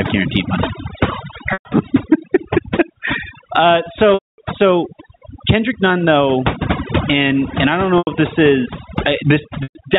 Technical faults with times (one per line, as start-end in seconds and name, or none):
0.00-9.99 overdone noise removal
0.00-9.99 gain pumping
1.53-1.65 packet loss with pitch repetition
4.14-4.38 packet loss with pitch repetition
7.98-8.07 packet loss with pitch repetition
9.63-9.75 packet loss with pitch repetition